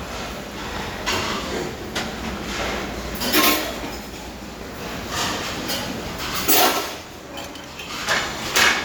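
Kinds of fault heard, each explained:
Nothing stood out on listening to this everyday sound.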